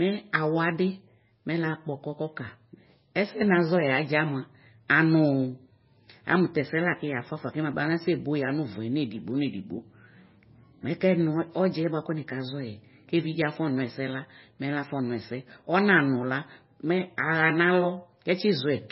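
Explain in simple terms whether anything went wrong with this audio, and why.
Throughout the speech, the treble stops sharply at 5.6 kHz, so s sounds lose their crispness, and the sound has a watery, swirly quality. This is likely heavy MP3 compression: short of data, the encoder discarded the top frequencies and faint detail that kept flickering in and out.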